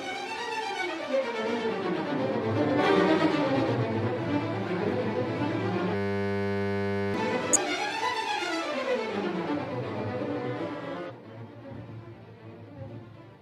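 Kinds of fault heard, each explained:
Damaged data in a compressed stream: Corrupted bytes in the encoded stream made the decoder misread frames, lose sync and hunt for the next frame header. Each time it leaves a brief glitch of about 50 to 60 ms, at 2.74, 7.53 and 11.06 s.
System hang loop: The system froze while the sound hardware kept replaying one 10 ms stretch of its buffer. From 5.95 to 7.14 s that slice repeats 119 times, giving a steady 100 Hz buzz in place of about a second of the real audio.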